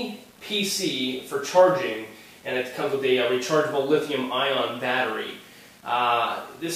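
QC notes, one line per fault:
Throughout: low bit depth without dither. A grainy distortion rides along with the sound, roughly 30 dB below it. The likely cause is rounding to very few levels with no dither, which fits 8-bit audio. The error follows the waveform instead of masking it.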